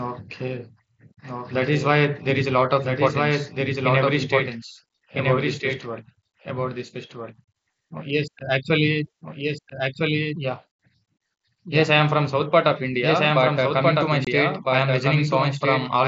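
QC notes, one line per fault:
Throughout: doubled audio track. A second full-band copy of the whole recording runs about one and a half seconds behind the original and only about 5 dB quieter. It is most likely a second capture through a slower path, or an edit holding two out-of-step copies. Unlike room echo or reverb, the copy has no decay tail, no added room colour and no dulling. It is one clean repeat at a fixed lag, so phrases overlap instead of smearing.
14.25–14.27 s: unconcealed Bluetooth headset packet loss. Just after "but uh", about 22.5 ms of audio drops out, which fits three lost headset frames. It is replaced by silence or an idle pattern, with hard edges. On this wideband mSBC link, which carries sound up to 8 kHz, nothing fills or smooths the hole. That sets it apart from concealed loss, which smears or repeats sound, and from a gradual fade or level dip.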